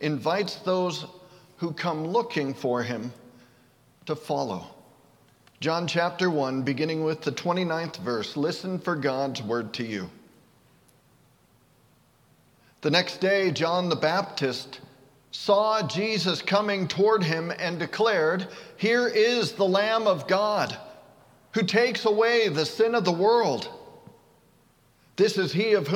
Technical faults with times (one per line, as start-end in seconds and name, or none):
none